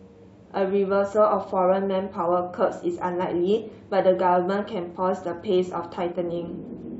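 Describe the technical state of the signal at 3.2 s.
The signal at 3.2 s is intact, with no audible fault at that point in the speech.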